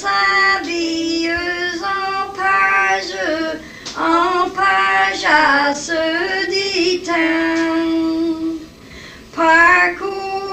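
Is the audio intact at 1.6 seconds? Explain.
No. USB whine runs through the whole clip, so it is present at 1.6 s as well. The USB bus pulls current in regular 1 ms frames, and that periodic draw leaks into the audio path through shared power or ground. The result is a fixed-pitch tone at 1 kHz, its strongest component, sitting roughly 40 dB below the wanted sound: quiet, a thin whine.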